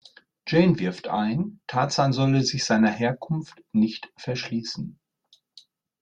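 Nothing here calls for attention, since the speech runs along from beginning to end without a single technical fault turning up anywhere.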